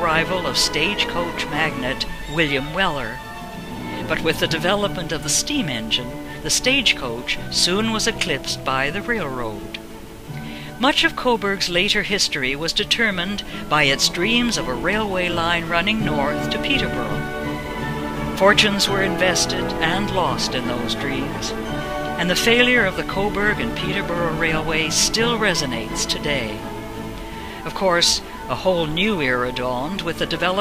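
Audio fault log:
No faults are heard anywhere in this audio. Nothing in it calls for a timed entry in the log.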